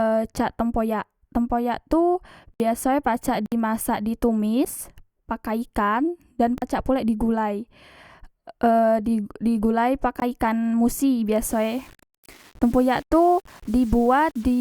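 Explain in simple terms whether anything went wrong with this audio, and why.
Several times the playback system probably fell behind and handed over empty stretches of audio, a fault called a block of digital silence. The speech cuts out at 2.54–2.60 s, 3.46–3.52 s, 6.58–6.62 s and 10.20–10.22 s, and there is a brief tick at 4.65 s.

From 11.44 s to the end, the speech turns grainy and rough, especially in its quieter parts. The likely cause is low bit depth without dither: the sound was rounded to only about 7 bits, so fine detail becomes coarse steps.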